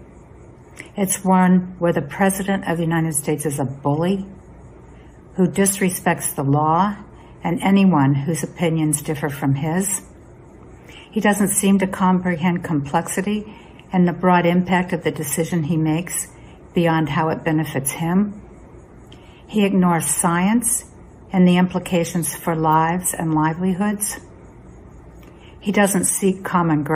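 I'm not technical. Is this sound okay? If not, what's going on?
Yes, nothing in this recording stood out as a problem when I listened to it.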